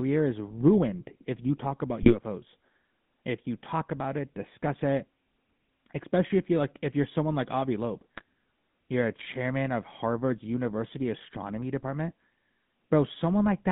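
Speech runs throughout the clip with the buzzy, gravelly roughness of the GSM full-rate codec. The sound fits a 13 kbps GSM full-rate coder. It models the vocal tract and rebuilds the excitation from a coarse pulse train, so voiced sounds come out rasping rather than smooth. On a spectrogram, energy stops sharply near 3.6 kHz with almost nothing below about 150 Hz, and the harmonics inside that band look smeared and grainy instead of cleanly striated.

GSM bit errors break through twice, from 2.0 to 2.16 s and from 8.15 to 8.22 s. Each time the voice briefly turns into a squawk and gargle. Corrupted filter, pitch and gain parameters reach the decoder, which throws the spectral shape off and can spike the level across the four frames hit. This points to a weak link with a bit error rate around 3%. In the waveform these bursts show as short, jagged level jumps. On a spectrogram they appear as brief vertical smears of misplaced energy that break the normal harmonic pattern.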